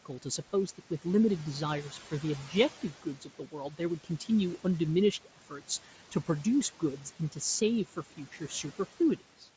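Throughout the speech, noise suppressor artifacts lower the background by about 12 dB between phrases. A spectrogram shows its floor pumping frame by frame.

From 3.03 to 3.54 s, and again from 8.17 to 8.64 s, there is speech cut by the noise suppressor. It mistakes quiet speech for noise and pulls it down by about 11 dB and then about 8 dB, over roughly a fifth and then a tenth of a second. The cut speech sounds swallowed, and the waveform shows abrupt dips in envelope.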